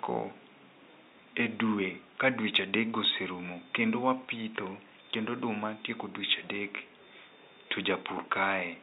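Speech recording with no technical faults, with room noise sitting about 38 dB below the speech.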